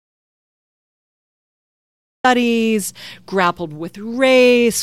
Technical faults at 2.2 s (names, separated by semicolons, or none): audio dropout to silence